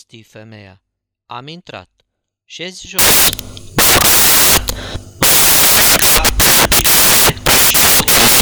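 From 2.99 s to the end, the speech gives way to loud, harsh broadband noise. These are samples built from the wrong bytes: the reader misassembles each sample, so its rapidly changing low bits become the dominant part.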